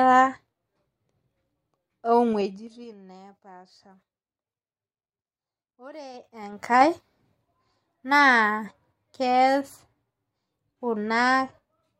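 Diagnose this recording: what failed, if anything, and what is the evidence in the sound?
Zipper noise at 2.29 to 2.96 s, as the level drops by around 25 dB, and again at 6.10 to 6.85 s as it climbs back. A gain control in the buffer-level processing stage moves in unsmoothed 3 dB jumps, roughly ten per second, and each jump ticks audibly across the speech.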